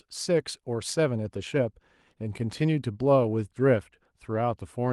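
Listening to this speech recording, nothing stood out as a technical problem.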